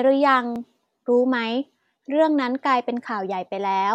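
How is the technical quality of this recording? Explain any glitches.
One glitch occurs. At 0.56 s a repeated buffer occurs: playback ran short of fresh audio, so a 5 ms buffer of speech played a second time. With a buffer this small, the hard seams produce a click or brief buzz rather than a stutter. Unlike a dropout, no gap of silence occurs, and no audio is lost.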